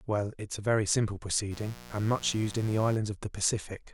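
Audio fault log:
1.49–2.99 s, mains buzz: a 60 Hz supply is leaking into the speech path, most likely through a dimmer, rectifier or a broken shield. The spikes it lets in switch sharply twice each cycle, at 120 times a second, so the interference carries a dense stack of 60 Hz harmonics climbing into the kilohertz range. The result is a steady, raspy buzz sitting roughly 20 dB below the speech for about a second and a half before it stops.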